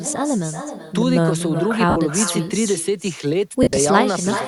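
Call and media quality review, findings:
Echo with no canceller, throughout: every phrase shadowed by a quieter, thinner copy roughly 0.4 s later, about 11 dB down. Far-end loudspeaker feeding its mic, no AEC. Spectrogram shows faint duplicated harmonic bands offset in time; waveform shows trailing ghost envelopes.

Lost LE Audio frames, 1.90–1.96 s (60 ms) and 3.63–3.77 s (90 ms lost, scattered over 140 ms, longest run about 40 ms): tonal content smears to noise. LC3 concealment repeating last spectrum with random signs. Spectrogram shows harmonics blurring into broadband wash; waveform loses periodicity. Light codec coloring in the untouched sections.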